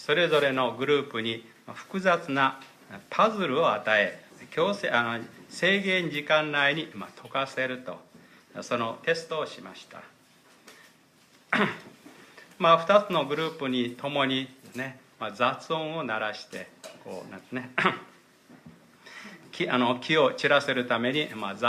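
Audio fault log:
No fault is found in this audio.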